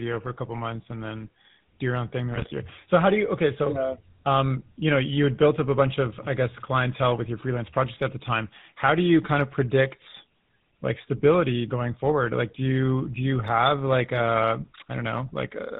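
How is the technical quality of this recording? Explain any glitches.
The recording is plainly coloured by a low-rate mobile codec from start to finish, and one short burst of corruption breaks up the speech early on.

GSM full-rate codec, throughout: the speech passes through a vocal-tract model excited by coarsely spaced pulses, consistent with a 13 kbps GSM full-rate stream. Nothing above 4 kHz survives, and the voice takes on a plainly audible buzzy, gravelly roughness.

GSM bit errors, 2.31 to 2.54 s: corrupted bits reach the decoder, consistent with roughly a 1.2% error rate across about a dozen consecutive frames. Damaged filter, pitch and gain values distort the spectrum and level frame by frame, so the speech briefly breaks into squawks, pops and gargling.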